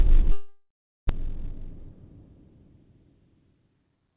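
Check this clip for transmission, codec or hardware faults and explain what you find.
Two kinds of trouble turn up here, both on the network side of what sounds like a call path through G.711 A-law, with nothing above 4 kHz.

From 0.32 to 1.11 s the sound doesn't cut cleanly. The last bit gets smeared into a buzzy tail that fades out, followed by roughly a third of a second of silence. When the sound returns, about 0.6 s of it has simply gone missing. That pattern is most likely a long network dropout. Packets stopped arriving, the receiver kept extending what it last had until it ran out of plausible material, and it picked up again from later audio. The gap also left the buffer holding noticeably more delay, on the order of 150 ms.

A jitter buffer speed-up follows. From 1.20 to 2.47 s it's gentle, about 103% speed with around 40 ms trimmed, too slight to sound hurried. From 3.53 to 4.12 s it's much harder, about 115% with roughly 100 ms cut, and the hurrying is obvious. 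In both cases the receiver snips out short pitch-period chunks over and over, so the pitch stays put while the timing compresses.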